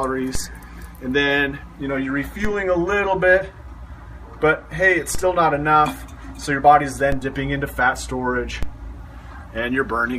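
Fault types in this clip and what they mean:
DC step: at 0.35, 2.45, 5.15, 7.12 and 8.63 s the zero line jumps about -12 dBFS, each a low thump decaying as through a 5 Hz high-pass.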